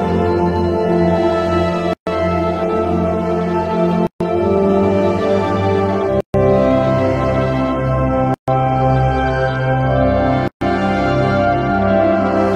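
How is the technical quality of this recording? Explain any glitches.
The recording has a repeating dropout. Gaps at a join of encoded pieces open at 1.93, 4.07, 6.21, 8.34 and 10.48 s, each about 136 ms long, recurring every couple of seconds. The pieces were encoded separately and butted together untrimmed, so encoder start delay and final-frame padding leave holes with smeared edges before the sound resumes where it left off.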